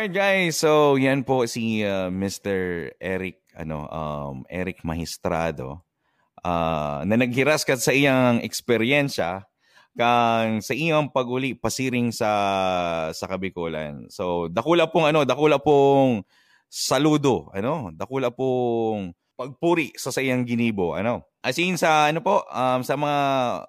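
From 14.58 to 15.93 s, loud speech peaks crackle briefly: hard clipping, the signal overdriving a stage by about 1 dB so its peaks are sliced flat.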